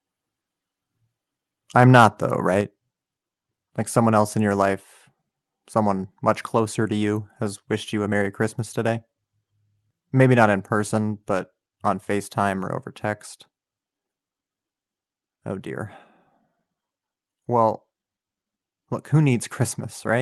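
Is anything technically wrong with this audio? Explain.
Yes, there are two related problems early in this speech clip.

From 1.8 to 2.06 s there's microphone overload. The input level was likely set too high, so peaks ran about 4 dB past the converter's limit and a few percent of samples got flattened. You hear it as a harsh, crackly edge on the loudest syllables.

Then at 2.61 s the microphone volume steps down. This is likely the call software reacting to that clipping by cutting the input gain in one move, about 4 dB. Voice and background both drop abruptly at that moment and stay lower.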